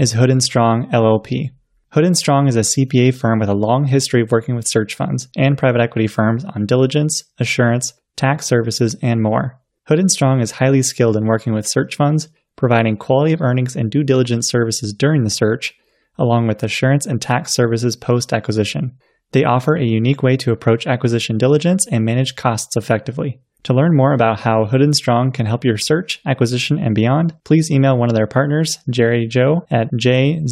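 No technical faults are audible anywhere in the recording.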